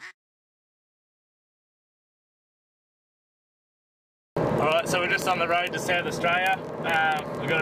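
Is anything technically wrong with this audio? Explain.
Yes. Word clock ticks run from 0.12 s to the end, at 7.6 s. The receiver's clock drifts against the sender's, by roughly a tenth of a percent. About every 20 ms one sample is dropped or repeated, giving around 300 sharp, uneven ticks. Unlike random clicks or dropouts, they keep a steady rate and leave no gaps.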